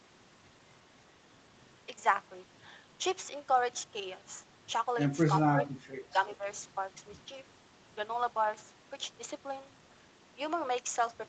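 At 5.54–5.58, 5.8–5.86 and 6.38–6.45 s the speech dips briefly, by up to about 10 dB. That's likely speech suppressed in double talk, with the echo canceller ducking everything.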